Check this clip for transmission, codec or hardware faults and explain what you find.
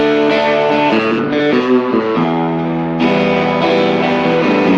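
Nothing stood out on listening to this clip.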